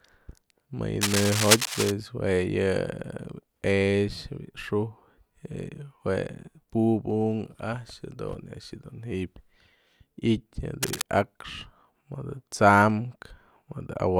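Scratchy, rustling bursts cut over the speech from 1.01 to 1.92 s, about as loud as the voice, and more faintly from 10.83 to 11.02 s. This is cable scratch noise, likely from a worn cable or connector whose contact kept flickering as it was moved.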